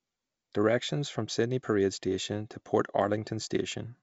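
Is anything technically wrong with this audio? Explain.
No, no technical faults present.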